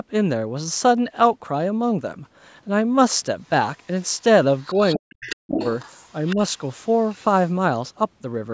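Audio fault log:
3.44–3.49 s, 3.80–3.87 s and 6.95–7.16 s, other side's voice leaking through: the echo canceller likely left some of the far end's loudspeaker sound in the microphone path. What gets through is faint, about 40 dB below the talker in the two short scraps and about 35 dB in the later one. It registers as brief ghostly fragments behind the main sound rather than a clear second voice.
4.57–5.36 s and 5.57–6.36 s, other side's voice leaking through: here the canceller likely failed more badly, so a much stronger residue of the loudspeaker signal passes. It sits only about 15 dB, then about 10 dB, under the talker, loud enough to hear as a second voice running alongside.
4.96–5.59 s, speech suppressed in double talk: with both sides active at once, the echo canceller likely could not tell the local talker from the echo and clamped the microphone signal down. The talker's level collapses, by as much as roughly 40 dB, for about 0.7 s, so the speech nearly vanishes or breaks into pieces while the leaking far-end voice overlaps it.
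6.36–6.40 s, speech suppressed in double talk: at the tail of the second strong leak, the suppressor likely reacted again to the overlap and briefly pulled the talker down, only by about 5 dB over some 40 ms. It is heard as a slight momentary dip in level as the echo ends.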